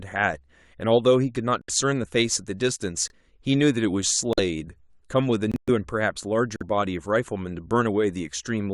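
At 1.61–1.70, 3.08–3.11, 4.33–4.40, 5.51–5.70 and 6.56–6.63 s, corrupt frames are muted: the decoder rejected damaged frames, leaving abrupt silent holes while timing stays intact, unlike concealment's smeared fill.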